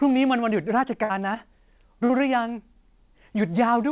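A burst of packet loss occurs from 1.04 to 1.11 s. A run of packets failed to arrive, so the receiver extended the last sound for about 54 ms and turned it down as a held, fading continuation. Playback then resumes with about 60 ms of speech skipped.

Short concealed packet loss follows at 2.05 to 2.11 s, where about 40 ms arrived too late for the decoder. The receiver patched 38 ms by carrying the preceding sound forward and blending back into the real signal, leaving a brief smear or wobble. Both gaps sit within the narrowband call sound, which has nothing above 4 kHz, consistent with G.711 coding.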